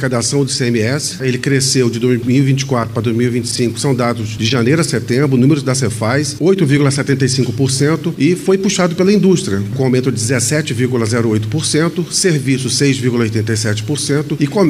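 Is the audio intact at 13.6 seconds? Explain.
Yes, the audio is intact at 13.6 seconds, with nothing there that breaks or distorts the signal.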